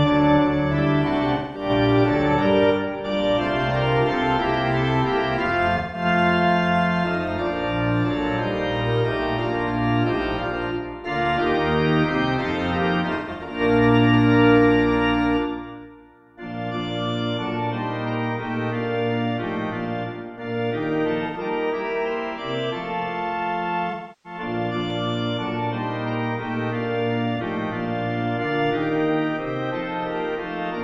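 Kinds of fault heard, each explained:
AAC frame loss with concealment: Missing coded blocks were filled in by the decoder from the last good spectrum, so the sound turns smeared, noisy or phasey rather than going silent. It happens six times, at 1.33 to 1.69 s, 5.77 to 6.05 s, 13.15 to 13.6 s, 21.26 to 21.38 s, 23.9 to 24.4 s and 27.36 to 27.41 s, lasting between about 43 and 341 ms. The 13.15 s patch is broken up, with its longest run near 150 ms.
Dropped samples: Two isolated sharp clicks, at 7.28 s and 24.90 s, each a thin vertical line across the spectrum with no audible gap. The abrupt step in the waveform is likely caused by a handful of samples missing from the stream, far too brief to remove any sound, so the discontinuity itself is all that is heard.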